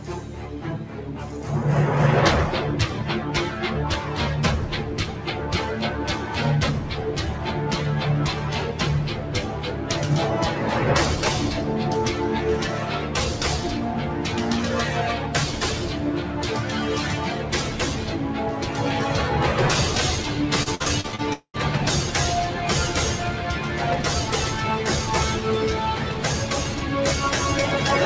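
Noise suppressor applied to music or sounds, throughout the clip: a speech-tuned suppressor treats sustained tones, ambience and reverb as noise and pulls them down by about 5 dB, so attacks pass while held sound and decays sink, giving a pumping, thinning quality. Repeated packet loss (robotic sound), from 20.63 to 21.21 s: six gaps, the longest 58 ms, are each patched by extending the previous sound, so about 38 percent of that span is synthetic fill and the audio turns choppy. Long network dropout, from 21.33 to 21.57 s: the sound smears into a fading buzz for roughly 200 ms, about 80 ms of it silent, before audio resumes with that stretch missing, most likely because nothing arrived over the network. All of this sits on a call path whose G.722 coding leaves no content above 8 kHz.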